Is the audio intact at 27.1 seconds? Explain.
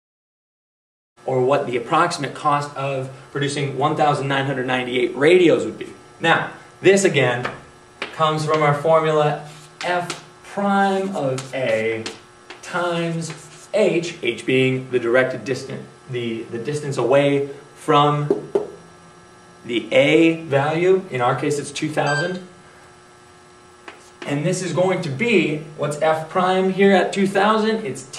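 Yes, the audio is intact at 27.1 seconds, with no fault at that moment.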